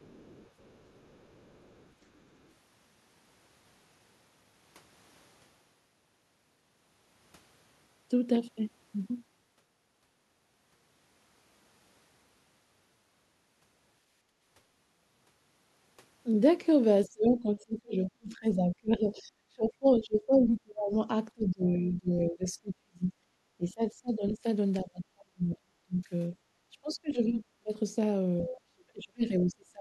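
Other side's voice leaking through, 0.0 to 2.49 s: a faint second voice sits far beneath the talker, likely loudspeaker playback the echo canceller left in the microphone.

Background gated by the echo canceller, 14.22 to 14.41 s: the room sound drops by about 13 dB for roughly 0.2 s as the canceller briefly clamps the microphone, then recovers.

Speech suppressed in double talk, at 17.06 to 20.94, 21.34 to 23.14, 23.57 to 24.44, 24.83 to 26.35, 26.72 to 27.72 and 28.44 to 29.81 s: the talker's voice repeatedly dips or breaks up, falling by some 25 to 40 dB at worst, likely because the canceller mistook it for echo while both sides spoke at once.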